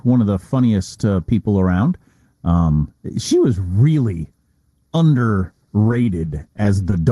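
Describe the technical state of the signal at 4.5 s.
At 4.5 s the speech carries channel delay comb filtering, present throughout. One channel lags by roughly 0.2 ms before mono summing, notching near 3 kHz, so the voice sounds hollow and phasey.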